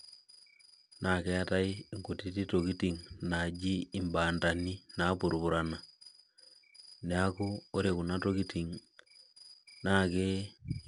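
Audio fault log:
throughout: 4-bit ADPCM compression. Each sample is coded as a coarse 4-bit step from a predicted value, with an adaptive step size, so the quantisation error is broadband noise that rises and falls with the speech level. It is plainly audible as gritty hiss riding on louder syllables, with roughness on sharp onsets where the step size lags. Nothing reaches above about 10.6 kHz, which fits a roughly 89 kbps stream at a reduced sample rate and dulls the top end.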